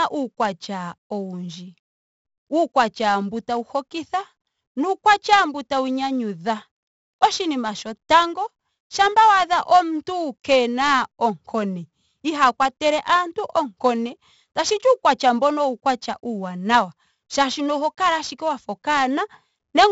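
The whole clip carries heavy 4-bit ADPCM compression. Each sample is stored as a coarse 4-bit step from a prediction. The resulting error is a gritty hiss that rises with loud speech. Sharp attacks distort. Nothing reaches above about 7.7 kHz, which dulls the sound. The 64 kbps rate fits a 16 kHz sample rate.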